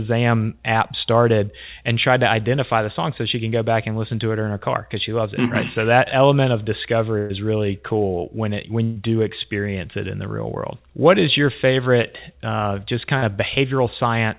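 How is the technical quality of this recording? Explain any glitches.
The recording has audible dropouts from network packet loss, and the sound is band-limited to about 4 kHz, which fits a narrowband telephone codec such as G.711.

Burst of packet loss, 7.18 to 7.32 s (after "that element of", before "really cool when it") and 8.84 to 8.98 s: a held buzz or fading hiss replaces about 120 ms each time. The receiver extended the last sound across the lost packets, and the audio resumes with that stretch missing.

Short concealed packet loss, 12.02 to 12.05 s (after "is your", before "uh just") and 13.17 to 13.24 s (after "uh just"): brief smears or wobbles appear where 20 to 40 ms went missing and the decoder filled the gaps.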